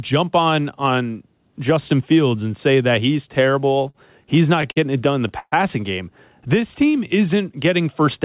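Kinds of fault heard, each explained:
Short stall from a late packet: one packet arrived late, so the last sound was held about 43 ms, near 3.9 s, with nothing lost, unlike a dropout that removes audio.
Repeated stalls (stutter): four separate holds between 4.62 and 5.54 s, the longest 129 ms, fill about a fifth of that stretch, giving a dragging stutter rather than one hitch.
Jitter buffer slow-down: from 6.56 to 7.43 s the buffer repeated pitch periods to rebuild its reserve, stretching speech to about 91% speed without lowering pitch, smoothly rather than in halts.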